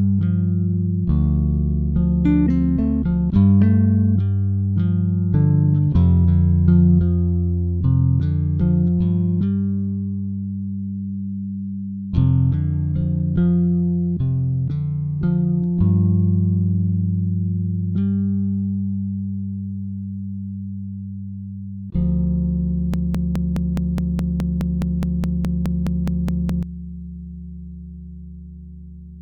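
A broken-record loop runs from 22.94 to 26.63 s: one 0.21 s fragment repeats exactly, back to back, 18 times. Unlike an echo, nothing decays or overlaps. The original audio for that span is gone, likely because the player or stream stalled.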